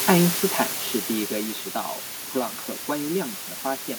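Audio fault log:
throughout: low bit depth with dither, a constant even hiss nearly as loud as the speech, consistent with about 4-bit dithered rounding; spectrogram shows a flat, uniform noise floor.
0.05 to 1.87 s: automatic gain falling, the gain control judges the input too loud or its background noise too strong and lowers it by about 10 dB, so speech and background sink together; the waveform envelope tapers steadily.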